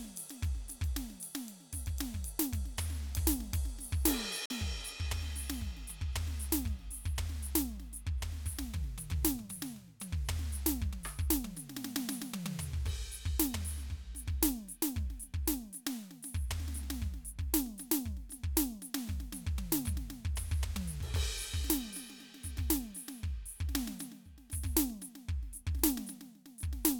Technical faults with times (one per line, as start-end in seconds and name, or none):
4.46-4.51 Bluetooth dropout